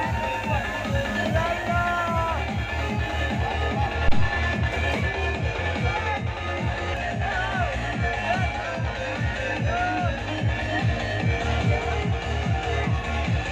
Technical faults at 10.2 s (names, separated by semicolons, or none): none